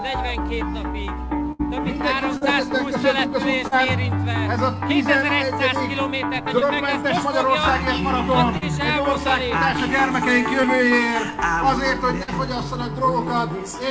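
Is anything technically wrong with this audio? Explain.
Yes. The audio has two kinds of network packet-loss damage. Nothing appears above 8 kHz, consistent with a G.722 call path at around 64 kbps.

From 1.52 to 1.61 s there is a burst of packet loss, roughly 80 ms of audio that never arrived. The receiver extended the last sound and faded it down to bridge the hole, then resumed later in the stream, so that stretch of material is simply gone. It is heard as a held, decaying buzz or hiss followed by a jump. On a spectrogram, the harmonics or noise continue as flat, unchanging bands that dim and then cut to unrelated content. The waveform shows a repeating, shrinking pattern.

Short concealed packet loss occurs at 2.37 to 2.43 s, 3.67 to 3.73 s, 6.59 to 6.63 s, 8.57 to 8.63 s, 10.61 to 10.65 s and 12.23 to 12.29 s. Each gap is roughly 20 to 40 ms. The decoder patched each one by continuing the preceding pitch or noise and cross-fading back into the real signal. 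These are heard as brief smears or wobbles, and a short transient can disappear. A spectrogram shows thin, smoothed vertical slices where detail briefly freezes. The waveform shows a short stretch at each point that repeats the preceding cycles or continues as noise.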